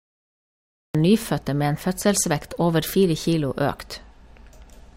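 A cut-off start runs from 0.0 to 0.95 s. The capture began late, so the speech bursts in from digital silence at 0.95 s partway through a sound. It has no natural onset or fade-in, and the abrupt entry lands mid-syllable.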